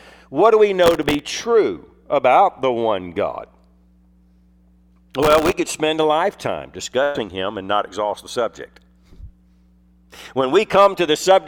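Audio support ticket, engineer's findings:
Processor overload crackle, 0.84 to 1.19 s and 5.23 to 5.54 s. Gritty tearing riding on the sound, then a clean stop. Probable component: host DSP/CPU audio thread. Dozens of consecutive missed deadlines on very short buffers, well under a millisecond each, every miss replaying stale audio with hard edges. Spectrogram: dense vertical broadband streaks across both spans. Waveform: jagged steps and discontinuities. Second burst is denser.

Burst of packet loss, 7.03 to 7.18 s. Sound stretches into a held, dimming tail, then jumps ahead. Probable component: network receive path and concealment. About 120 ms of audio was lost, and 113 ms was filled by extending and fading the last sound, with no silence. Spectrogram: smeared frozen band fading out, hard restart.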